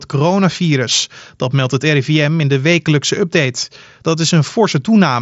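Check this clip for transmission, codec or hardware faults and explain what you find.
No transmission, codec or hardware faults are present; the speech sits on a normal wideband Bluetooth headset path with an mSBC link, band-limited at about 7.7 kHz.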